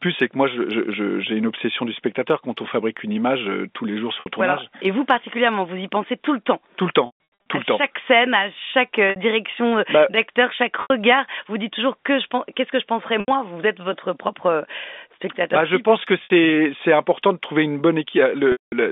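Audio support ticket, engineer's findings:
Packet loss with pitch repetition, seven events: 4.2, 7.06, 9.1, 10.82, 13.2, 16.24, 18.52 s. The receiver replays the last pitch period over the lost packets. The 60–80 ms gaps give a brief buzzy hold, e.g. after "je pense que". At 7.06 s about 320 ms is lost, scattered over 400 ms. The 200 ms loss at 18.52 s fades to silence, then the speech cross-fades back on the band-limited G.711 line.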